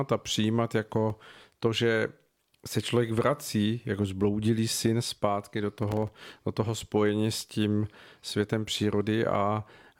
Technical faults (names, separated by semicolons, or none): processor overload crackle